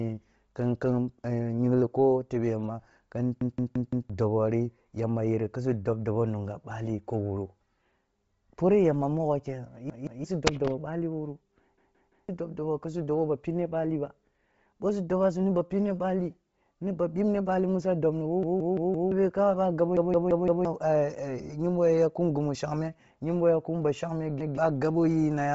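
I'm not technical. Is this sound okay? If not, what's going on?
No. The speech has two separate problems.

First, the whole clip sounds dull, grainy and breathy. Nothing is heard above about 7.7 kHz, so the crisp top end of the voice is gone. The likely cause is Bluetooth LC3 compression, the audio squeezing used by newer Bluetooth earbuds and headsets. Here it was squeezed hard. The codec discards most of the high sound and fills the gap with soft noise. That is the rough edge you hear.

Second, there is a repeated buffer at six points. The device ran out of fresh audio, so it replayed the last chunk. Each chunk is about a sixth of a second long, which fits an 8192-sample buffer. You hear this as a stutter, the same scrap repeating with hard joins. It happens at 3.41 to 4.10 s, 9.90 to 10.24 s, 11.78 to 12.29 s, 18.43 to 19.12 s, 19.97 to 20.65 s and 24.41 to 24.58 s. The longest ones repeat four extra times. 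Up to about seven tenths of a second of real speech is lost at each of those.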